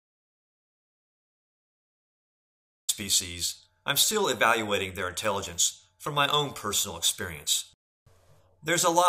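From the start to 2.89 s the clip is dead silent, with no room tone at all, an audio dropout to silence, likely from an input lost while recording continued.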